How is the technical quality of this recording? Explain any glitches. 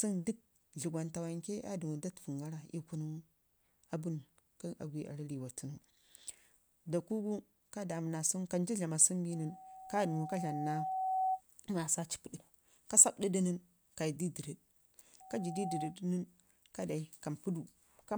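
The recording has two bursts of loudspeaker feedback squeal. The first runs from 9.32 to 11.42 s, just after "sungu kancu". The second runs from 15.2 to 15.96 s, just before "nən ka". The microphone is picking up a loudspeaker it feeds. At 756 Hz the loop gain tops one, so that tone grows by itself. The first swells over about two seconds to a few dB above the speech. The second rises in about half a second to roughly speech level.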